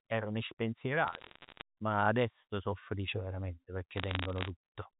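Telephone-band speech carried as G.711 mu-law shows bit errors on a digital phone line from 1.08 to 1.62 s, just before "ma adesso so felici", and from 3.98 to 4.48 s, after "so felici verament pecchè". Single flipped bits jolt individual samples, giving crackly ticks that appear as isolated waveform spikes and thin vertical streaks on a spectrogram. The first burst is denser, with errors likely around 0.7 bits per hundred.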